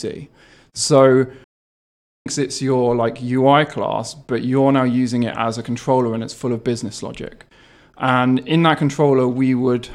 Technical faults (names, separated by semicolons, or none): stream reconnect